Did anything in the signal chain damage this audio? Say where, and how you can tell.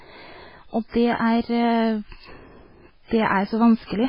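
Yes, two stages. At the codec stage, there's a hard ceiling with nothing above 5.3 kHz for the whole clip, plus watery, swirly speech, heavy damage that points to likely MP3 compression at a very low bitrate, around 16 kbps. Starved of bits, the encoder chopped the treble and let weak bands flicker frame to frame.

The converter also shows sample clock jitter throughout. There's a faint roughness riding on the speech, roughly 50 dB below it, that grows on louder and brighter bits and drops away in the gaps. The clock is wobbling by something under a microsecond, so fast-moving parts of the waveform get sampled at slightly wrong moments.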